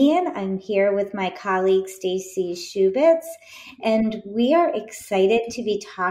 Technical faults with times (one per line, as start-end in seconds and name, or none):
none